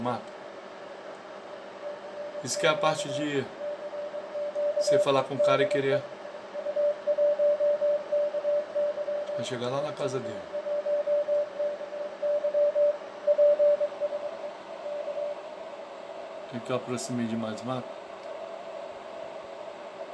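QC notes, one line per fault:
No faults heard anywhere in the audio.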